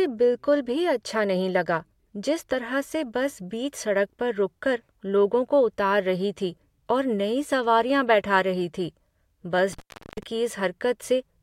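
Right near the end, from about 9.73 to 10.23 s, there's an intermittent contact fault: the speech drops out for roughly 0.39 s, as if a loose cable or plug briefly lost its connection. You get a scratchy crackle as the contact breaks and again when it reconnects. In between, the signal path is open, so the speech disappears and only a faint hiss remains until the connection catches again.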